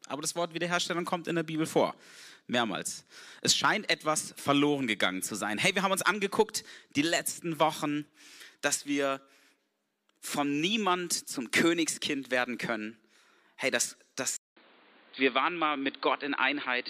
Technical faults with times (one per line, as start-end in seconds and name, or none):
14.37-16.90 input switched to a poorer device